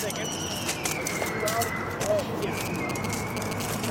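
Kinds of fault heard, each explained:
GSM signalling bursts: A nearby 2G phone sends short groups of radio bursts while signalling, and the audio circuit rectifies them. From 2.19 s to 3.86 s, a galloping dit-dit-dit of short 217 Hz buzzes appears. It sits only slightly below the main sound.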